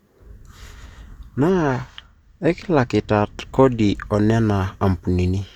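One channel runs a couple of samples late, a tiny fraction of a millisecond, and is summed to mono in this speech from 1.50 to 4.06 s. This channel delay causes comb filtering, cutting the highs with a first notch near 10 kHz and leaving the sound dull.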